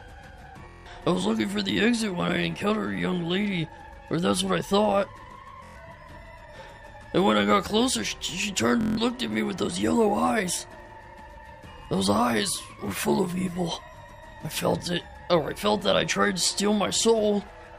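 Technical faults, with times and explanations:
0.69–0.86 s, 5.64–5.76 s and 8.81–8.97 s: Bluetooth stutter. The wireless link lost or delayed audio packets, so the receiver kept replaying its last short buffer until fresh data arrived. Each gap becomes a rapid machine-gun buzz of one repeated slice, lasting about 162 ms, 116 ms and 162 ms, which fits roughly seven, five and seven missing packets. The sound then resumes further along, as though it had kept playing underneath.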